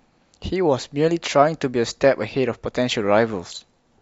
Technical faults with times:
none

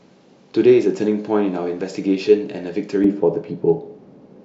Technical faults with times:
3.04-4.45 de-emphasis applied wrongly

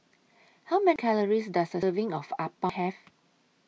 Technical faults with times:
0.96 audio missing between chunks
1.83 audio missing between chunks
2.69 audio missing between chunks

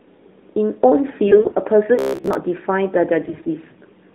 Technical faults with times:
1.28-1.55 AMR bit errors
1.99-2.39 robotic sound from repeated short buffers
3.22-3.49 AMR bit errors

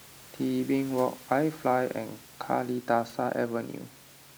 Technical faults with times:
none

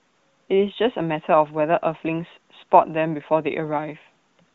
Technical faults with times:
none

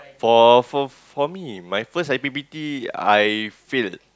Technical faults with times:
none

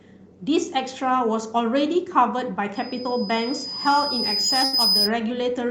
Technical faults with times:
2.75-5.11 loudspeaker feedback squeal
3.03-3.07 short concealed packet loss
4.65-4.75 burst of packet loss

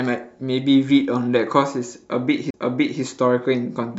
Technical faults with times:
2.50-2.54 CD skip

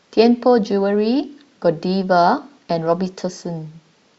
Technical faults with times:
none

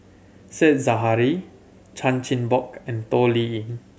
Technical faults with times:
none

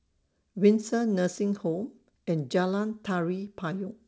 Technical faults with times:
none

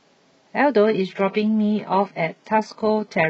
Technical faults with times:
0.84-3.29 adaptive stream at a lower bitrate

